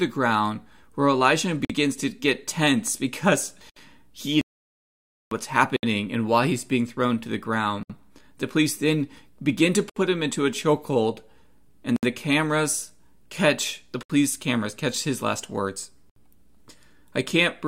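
Right at 1.65 s, just before "to get tense because", the speech drops out for about 49 ms. That's a gap at a join of encoded pieces: the speech was encoded in 2-second chunks and stitched together without trimming the encoder's start delay and end padding. It repeats at 3.70 s.

From 4.41 to 5.31 s the speech just stops mid-flow for about 0.9 s and then picks up where it left off. That's a playback stall, likely from the player starving for data or its thread getting blocked.

After that, the gaps at the chunk joins continue every 2 s at 5.76, 7.83, 9.90, 11.96 (right before "the cameras catch the"), 14.03 and 16.10 s (just after "catch his last words"). Each of these is about 67 ms, with smeared edges.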